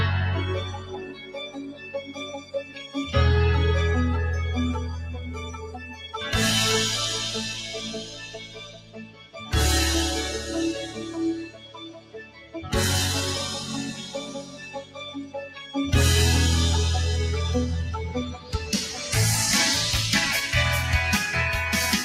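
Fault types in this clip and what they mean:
Noise suppressor applied to music or sounds: a speech-oriented noise suppressor is running across the whole clip, treating sustained and decaying material as noise. Level swings by about 10 dB as it engages and releases, so the sound pumps and thins while onsets pass largely intact.
Sound cut by the noise suppressor: six stretches where the suppressor pulls steady or fading sound down harder than elsewhere, at 0.78–2.96, 5.53–6.11, 8.03–9.53, 11.46–12.72, 13.99–15.75 and 18.33–18.69 s. The deepest dips reach about 13 dB, and tails are cut short.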